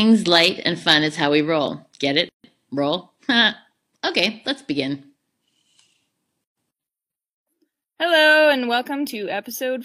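At 2.29 to 2.44 s and again at 6.44 to 6.57 s, the speech drops out for gaps of about 150 and 133 ms: gaps at joins of encoded pieces, with encoder start delay and final-frame padding left untrimmed. The waveform shows flat dropouts with smeared edges, and the spectrogram shows blank vertical bands.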